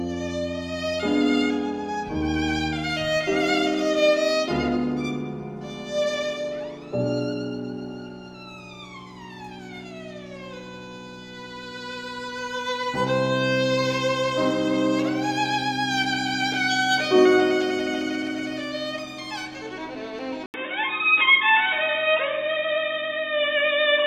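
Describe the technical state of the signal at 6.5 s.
The signal at 6.5 s is intact, with no audible fault at that moment.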